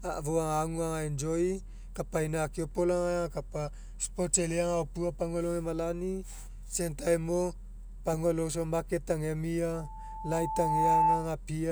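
From 9.73 to 11.35 s, loudspeaker feedback squeal: an 875 Hz tone swells over about a second to roughly 10 dB above the speech, a self-sustaining loop, unlike steady hum.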